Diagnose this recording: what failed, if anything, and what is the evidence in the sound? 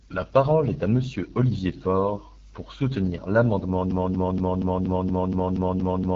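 Throughout, the speech sounds rough and raspy, and nothing is present above about 7.5 kHz. This points to the AMR wideband (HD Voice) codec at 8.85 kbit/s, one of its two lowest rates. A pulse-driven model rebuilds the band below 6.4 kHz, and shaped noise fills the top. Narrowband telephone audio would stop near 3.4 kHz.

From 3.91 s to the end, a 0.24 s fragment repeats exactly, back to back, ten times. This is a broken-record loop, likely from a stalled player or stream resending its last fragment, so the audio due in that span is lost. Packet-loss concealment would fade or vary; these copies stay identical.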